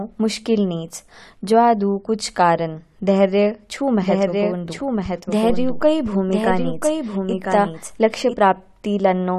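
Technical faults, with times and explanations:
4.01 to 8.33 s: doubled audio track. The speech was likely picked up a second time through a slower path, or an edit kept two copies out of step, so a dry, full-band repeat about a second behind and a few dB quieter runs alongside, starting and stopping abruptly.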